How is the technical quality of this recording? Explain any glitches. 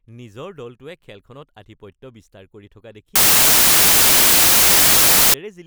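There's one real glitch. From 3.16 to 5.34 s, right after "কৰি থকা", you get samples built from the wrong bytes. The reader misassembles each sample's bytes, so the jittery low bits dominate, and it blasts as loud, harsh broadband noise.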